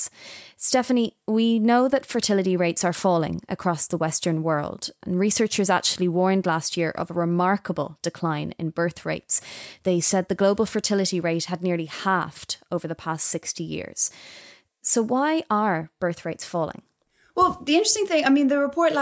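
No technical faults occur at any point in the speech, so there is nothing to describe in time order.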